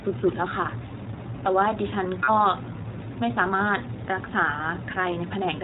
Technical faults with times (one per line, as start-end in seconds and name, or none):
0.00-5.63 iLBC codec
2.23-2.30 lost iLBC frames